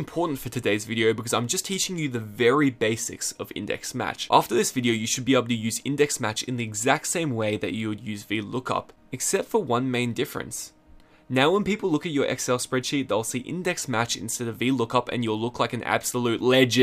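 No technical faults are audible.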